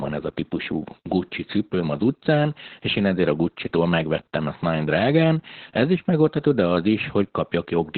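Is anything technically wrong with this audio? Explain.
Yes. Throughout the speech, Opus voice compression in narrowband SILK mode, at a rate that points to about 8 kbps, codes the excitation coarsely, leaving it muffled, hoarse and slightly robotic.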